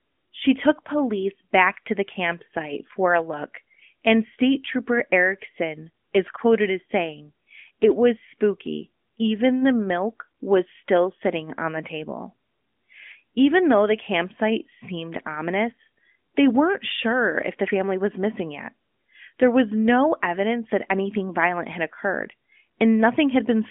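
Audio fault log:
No faults: the speech comes through an AMR narrowband mobile codec path that holds a phone-line band of roughly 200 Hz to 3.4 kHz with nothing above about 3.6 kHz, and the coding leaves only a light texture on the sound.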